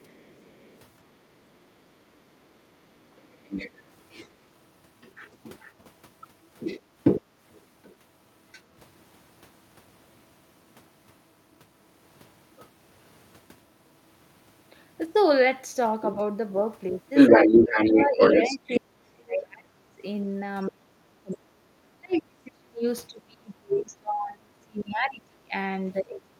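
From 0.0 to 1.25 s, 3.45 to 8.61 s, 12.58 to 12.67 s, 16.02 to 16.14 s and 17.15 to 18.8 s, the other side's voice is leaking through. It starts faint, later comes close to the talker's level and finally rises above it. That's likely loudspeaker echo the canceller missed. From 17.3 s to the end, the talker's speech is suppressed in double talk, dropping by as much as about 30 dB, likely because the canceller turned down both voices.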